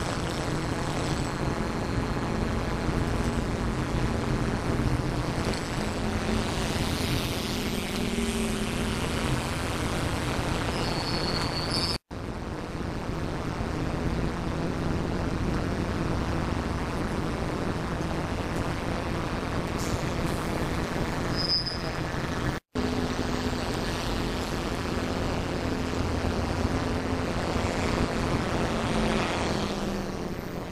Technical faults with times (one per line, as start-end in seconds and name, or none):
0.00-30.71 overlap-add ripple